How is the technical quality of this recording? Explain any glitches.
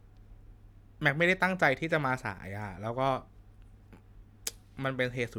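The recording has no audible technical glitches: the signal holds steady and continuous throughout, with nothing disrupting playback.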